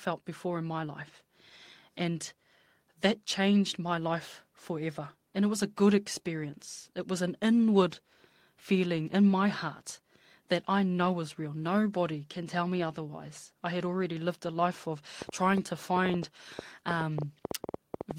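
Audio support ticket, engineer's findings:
Train of clicks, 15.22 s to end of clip. Ticking over the speech at about 7 per second, unevenly spaced, peaks well above the signal. Likely interference or a failing interface injecting pulses. Spectrogram: thin vertical broadband lines. Waveform: sharp, similar-shaped spikes.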